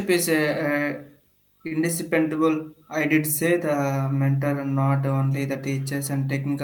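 At 1.67 to 1.73 s the speech briefly hangs: one sound is drawn out a little too long, with a faint buzzy, flattened quality, before the talker carries on exactly where they left off. This is a short stall from a late packet. The next packet had not arrived when due, so the jitter buffer ran dry and the receiver stretched the last sound by about 37 ms to cover the gap. Nothing is lost, but everything afterwards plays 37 ms later.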